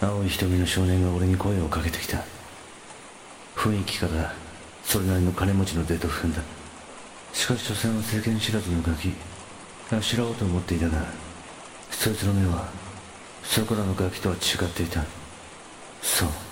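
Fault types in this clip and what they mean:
Damaged data in a compressed stream: corrupted bytes make the decoder misread frames and hunt for the next header, giving two brief glitches of about 0.04 s near 6.36 s and 11.82 s. A spectrogram shows brief disruptions, and the waveform shows abrupt glitches.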